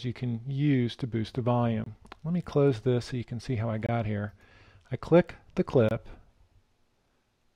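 Gaps between chunks cut the sound at 1.84 s, 3.86 s and 5.89 s. Each hole lasts about 23 ms. The audio arrives in 2-second chunks, with silence at every join from codec padding or a late-starting player. Nothing is lost. The sound simply drops out at steady intervals.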